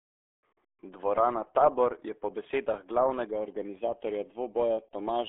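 The speech passes through the RealAudio 14.4 codec from start to finish, a dial-up-era coder whose heavy data reduction fits an 8 kbit/s stream. Nothing gets through above 3.8 kHz, and the band sits roughly between 300 Hz and 3.5 kHz, so the voice sounds muffled, gargly and smeared.

From 3.26 s to the end, channel delay (comb filtering) sets in. One channel lags the other by a fraction of a millisecond and the two are folded to mono, which cancels evenly spaced frequencies from around 1.5 kHz upward and makes the sound hollow and phasey.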